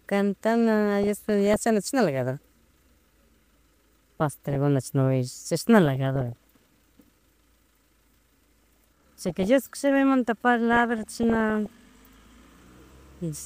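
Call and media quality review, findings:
DAB burbling at 1.03–1.65, 4.20–4.55, 5.86–6.33, 8.64–9.47 and 10.73–11.69 s. Noise blips and sub-band level jumps come from bit errors, probably under 1 percent, that slip into the MP2 sub-bands.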